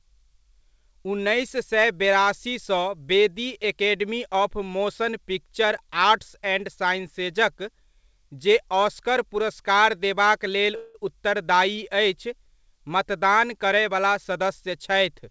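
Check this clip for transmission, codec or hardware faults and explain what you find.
Two transmission faults stand out in this speech, both from the receiving end of a call path whose top end stops at 8 kHz, consistent with G.722 wideband coding.

From 10.76 to 10.96 s there is a call audio freeze. Packets were likely held up in transit, and the jitter buffer ran dry. The receiver bridged the gap by extending the last sound for about 185 ms as a fading buzz or hiss. When the packets arrived, playback resumed where it had stopped, so nothing was lost. The speech simply pauses unnaturally, and everything after it runs 185 ms later.

From 13.64 to 14.92 s there is a jitter buffer speed-up. Having built up more delay than it targets, the buffer trimmed short pitch-period slices from the signal, over and over, discarding about 70 ms in total. Because whole cycles are cut rather than resampled, the pitch stays put while the pace rises to 105%, so this stretch of speech sounds slightly rushed.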